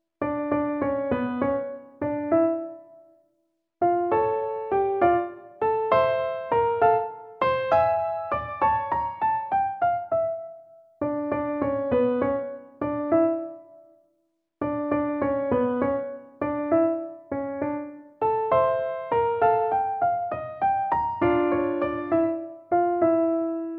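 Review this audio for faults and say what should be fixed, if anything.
No audible faults; nothing needs fixing.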